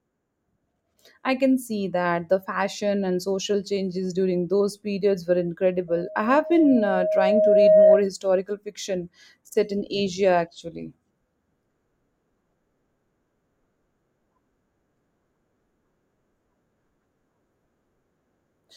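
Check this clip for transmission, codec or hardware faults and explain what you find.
A loudspeaker feedback squeal runs from 5.88 to 8.07 s. The microphone is picking up the loudspeaker it drives, and at 627 Hz the gain around that loop exceeds one, so each pass reinforces the tone. It swells over roughly two seconds into a steady squeal that ends up about 10 dB louder than the speech, a single piercing pitch sitting on top of the voice until the loop is broken.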